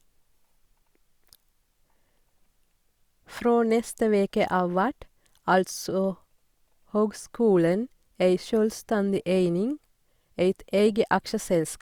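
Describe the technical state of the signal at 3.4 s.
At 3.37 s a nearby switch, motor or static discharge most likely arced for a moment, and the audio line picked that brief burst of electrical energy up as an electrical switching spike. It lasts well under a hundredth of a second and sits on top of the speech rather than replacing it. The result is a sharp snap, peaking at roughly -25 dBFS, which is heard as a tight click against the talking.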